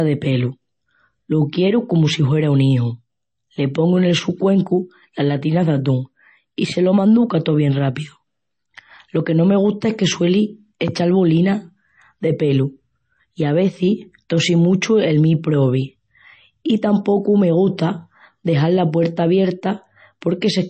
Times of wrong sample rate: none

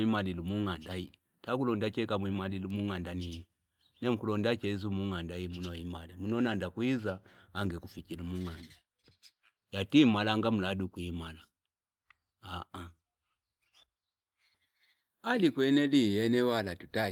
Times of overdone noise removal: none

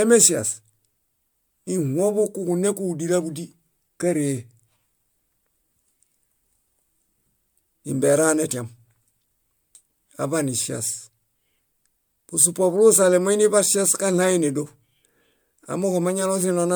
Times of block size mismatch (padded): none

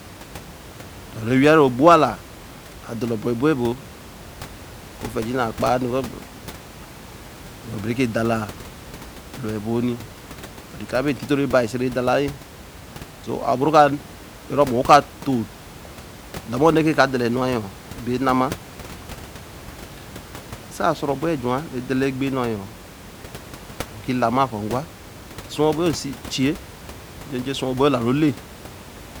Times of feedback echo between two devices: none

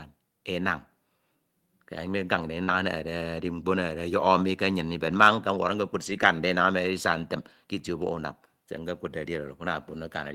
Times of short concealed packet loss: 2.63-2.70

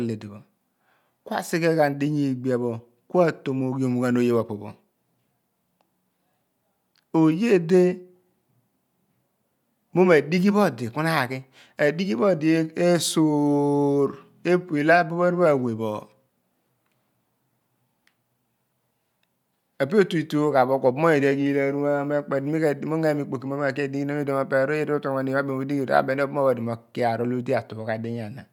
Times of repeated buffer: none

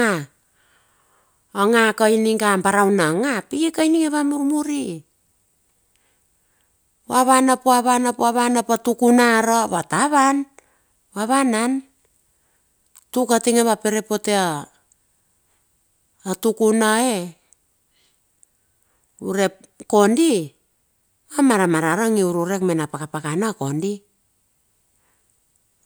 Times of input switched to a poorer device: none

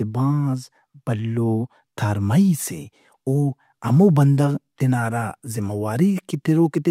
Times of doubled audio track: none

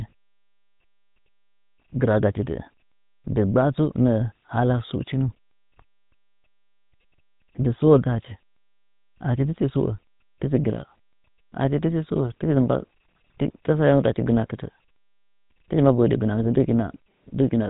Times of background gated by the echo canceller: none

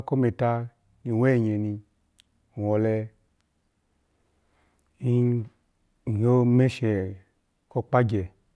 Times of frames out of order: none

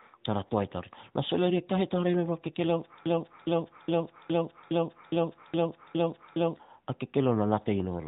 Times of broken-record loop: 3.06-6.56

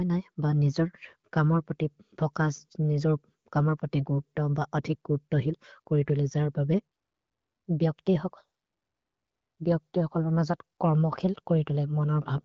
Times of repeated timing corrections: none

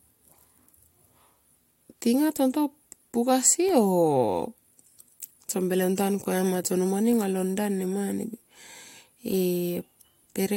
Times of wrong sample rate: none

